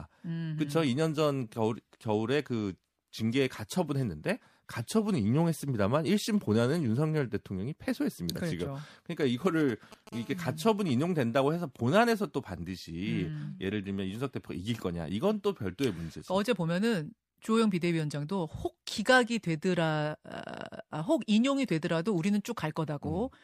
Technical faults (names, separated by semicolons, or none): GSM signalling bursts; GSM phone buzz